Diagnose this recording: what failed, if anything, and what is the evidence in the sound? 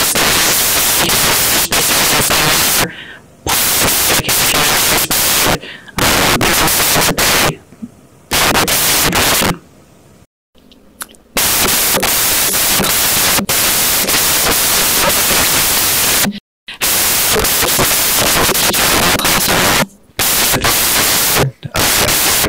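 Samples built from the wrong bytes, throughout the speech: a sample-format conversion fault in which misordered or misaligned bytes turn the low bits into loud, white-noise-like hiss.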